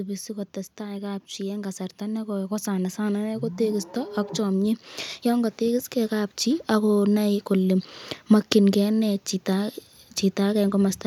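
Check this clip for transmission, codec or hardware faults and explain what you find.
The speech shows automatic gain rising twice, from 0.28 to 3.94 s by about 7 dB and from 4.46 to 7.0 s by about 4 dB. The gain control judged the input too quiet and slowly raised it, so voice and background swell together, unlike a speaker simply getting louder.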